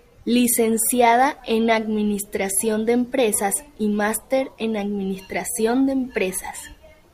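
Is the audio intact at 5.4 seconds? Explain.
No. At 5.4 seconds the speech carries a steady 50 Hz buzz that runs from 4.44 seconds to the end of the clip and sounds only while there is signal. This is a resampler restarted on every block. Each 20 ms block is converted on its own, so at every block edge the converter lacks the true neighbouring samples and leaves a small error. Those errors repeat fifty times a second, once per block, in a conversion from 44.1 kHz to 48 kHz.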